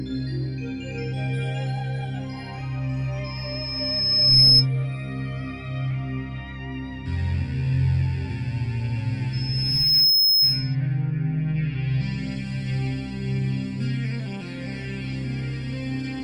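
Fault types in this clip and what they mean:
loudspeaker feedback squeal: at 3.24–4.66 s and 9.33–10.76 s, a 5.2 kHz tone swells within about a second, microphone re-amplifying its own loudspeaker output.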